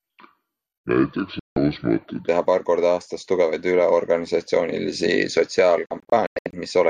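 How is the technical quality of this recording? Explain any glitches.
The recording has two kinds of problems: a slowed opening section and two dropouts where the sound cuts out.

From 0.0 to 2.28 s, just before "teha paar korda aastas", the speech runs slow and deep, at 0.658 times normal speed and about seven semitones low. This is a section at the wrong speed, likely from playback against the wrong clock. Pitch and tempo fall together, unlike a pitch shift alone.

Digital broadcast dropouts mute the sound when the receiver loses good frames. The first runs from 1.39 to 1.57 s, a single hole of about 170 ms. The second is several short holes scattered from 5.86 to 6.54 s, with the longest about 96 ms. What was sent during these gaps is lost.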